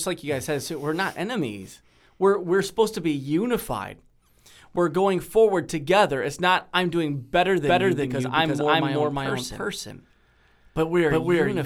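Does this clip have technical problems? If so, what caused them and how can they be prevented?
Yes. A slower second capture path likely adds a doubled audio track from 7.66 s, after "not I'm doing better", to the end: an equally loud, dry copy trailing by roughly 300 ms. Route the source through a single capture path, and mute any duplicate input or monitor return before recording.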